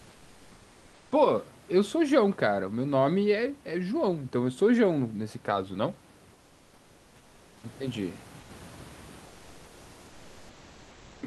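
In the pauses at 0.00–1.11 s, 6.33–7.63 s, 8.39–8.49 s and 9.25–11.21 s, the real room background drops out and comfort noise fills in: a flat, featureless hiss about 2 to 4 dB quieter, likely Opus DTX halting transmission between bursts of speech.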